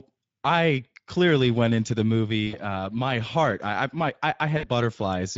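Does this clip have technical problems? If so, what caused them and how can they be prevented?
Yes, two kinds of problems. The whole clip carries Speex codec damage, and it's plainly audible: the speech sounds hoarse and grainy because this CELP coder has too few bits to model the excitation properly, so the fine detail of the voice gets replaced with noisy approximation. The overall quality points to a mid-range Speex setting somewhere around 17 kbps, and any upper band is just a shaped noise fill rather than real content. To prevent it, run Speex at a higher quality setting or switch to a more modern codec like Opus.

There's also VoIP packet loss concealed by the speech codec, twice. The first runs from 2.47 to 2.62 s, right after "clearly went into the" and before "my heart I I". The second runs from 4.57 to 4.69 s, just after "I I my I". Each gap is about 60 ms of missing audio, which fits three 20 ms frames. 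The decoder papers over the hole by repeating its last pitch and filter with shrinking gain, so you hear a brief smeared stretch that fades. Because each frame builds on the previous one, the voice stays a bit weak and off until it recovers after the packets return. To prevent it, improve the network path or add forward error correction and a sensible jitter buffer.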